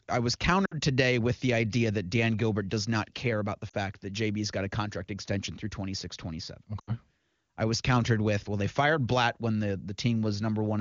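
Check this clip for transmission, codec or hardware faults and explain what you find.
The clip has one transmission fault, repeated three times, over clear wideband speech whose detail fits a high AMR-WB rate.

Lost AMR speech frames at 0.65–0.74 s (60 ms), 3.69–3.76 s (40 ms) and 6.79–6.96 s (80 ms): the decoder repeats the last good pitch and vocal tract settings at falling gain. The result is a sound that drops to near silence within two frames rather than a hard cut to silence or a click.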